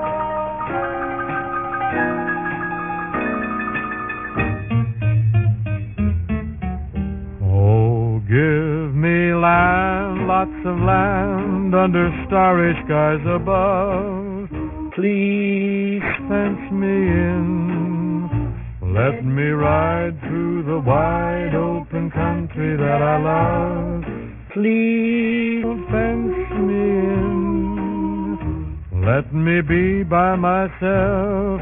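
The audio shows aliasing throughout: energy above about 3 kHz folds back as gritty, metallic, unrelated tones some 20 dB below the signal, and the spectrum runs hard to that edge, which fits a drop to a 6 kHz rate without an anti-aliasing filter.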